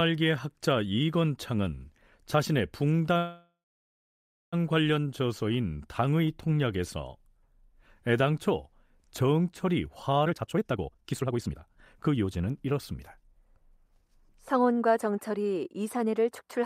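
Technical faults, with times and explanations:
3.17–4.55 s, call audio freeze: the sound stalls and its last fragment is stretched into a buzzy tail that fades, followed by about 0.96 s of silence before the audio resumes exactly where it stopped. This was likely a jitter buffer running empty while packets were held up. Nothing is lost, but about 1.35 s of delay is added. A spectrogram shows smeared horizontal bands decaying into a blank strip, and the waveform shrinks to a flat line.
10.25–13.03 s, jitter buffer speed-up: the sound runs at about 149% of its normal rate but keeps its pitch, so it comes across as hurried. The receiver was holding more buffered audio than it aims for and repeatedly cut out short pieces one or a few pitch periods long, removing about one and a half seconds in total to reduce the delay. On a spectrogram the harmonics stay at the same heights while the time patterns are squeezed together. 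The waveform shows tightly packed envelopes with small seams at the cuts.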